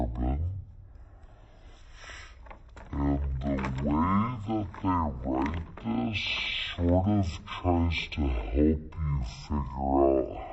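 From start to finish the sound drags at half speed, a full octave low, with a faint mirrored ghost in the upper spectrum. This is stereo read as mono: interleaved left and right samples were played one after another as a single channel.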